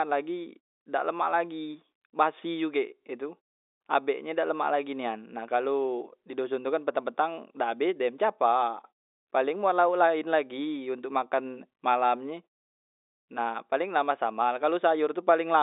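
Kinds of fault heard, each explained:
No faults are audible: the audio sits in a telephone band of roughly 300 Hz to 3.7 kHz with nothing above 3.8 kHz, consistent with G.711 mu-law coding, and the pauses fall silent and recover before the next sound without clipping any speech.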